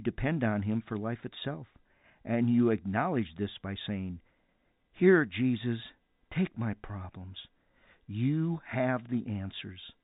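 No faults are audible anywhere in this speech recording.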